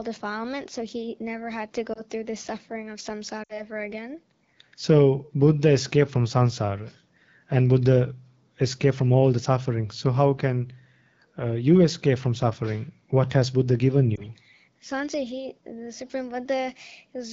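At 1.93 to 2.02 s, 3.44 to 3.60 s and 14.15 to 14.21 s, lost AMR speech frames cause the decoder to repeat the last good pitch and vocal tract settings at falling gain. The single frames give brief warbling dips. The three-frame run at 3.44 s drops to near silence within two frames. A spectrogram shows frozen harmonics dimming, and the waveform envelope sags.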